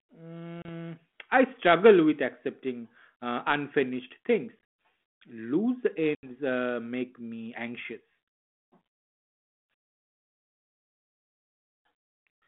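Hard-edged gaps cut the speech three times, each followed by a slightly distorted return that settles within tens of milliseconds: at 0.62 s a hole of about 30 ms; at 4.61 s a stutter of losses totalling about 120 ms scattered over 200 ms; and from 6.15 to 6.30 s an 80 ms gap just before "uh make me anxious". This is packet loss on an ADPCM call. The 32 kbit/s G.726 stream codes differences from a running prediction, so the silenced packets leave the receiver's predictor and step size out of step with the sender's until they resync.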